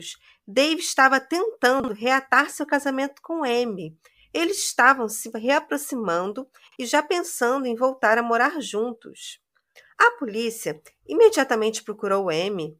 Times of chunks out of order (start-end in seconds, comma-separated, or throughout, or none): 1.80-1.88, 6.68-6.76